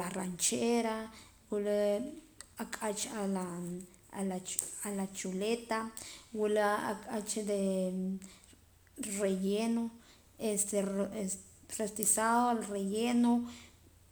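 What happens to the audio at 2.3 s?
Nothing goes wrong at 2.3 s; the audio plays through that moment intact, with no dropout, click or distortion.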